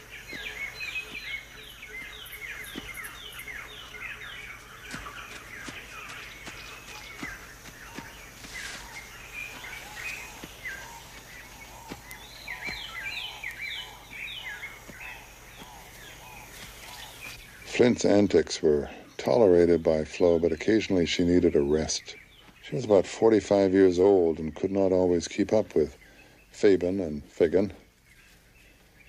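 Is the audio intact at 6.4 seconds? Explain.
Yes, the audio is intact at 6.4 seconds, with no dropout, click or other fault at that moment.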